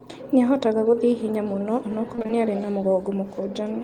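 A speech recording that turns briefly choppy and robotic from 2.15 to 2.31 s, with small pieces of sound dropping out. This is repeated packet loss (robotic sound): several short gaps, the longest 23 ms, were each papered over by extending the preceding sound, so about half that stretch is concealment rather than real audio.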